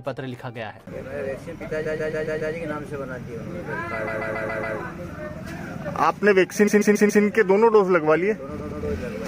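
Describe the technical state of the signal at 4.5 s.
At 4.5 s you're in the middle of repeated frames, from 4.07 to 4.76 s: one 139 ms block replays five extra times, so it stutters.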